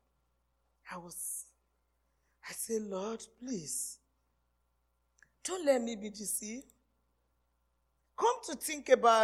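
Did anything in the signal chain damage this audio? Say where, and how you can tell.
No, nothing along the signal chain has left an audible mark on this audio. No stage, from the input wiring through to playback, shows any sign of damage.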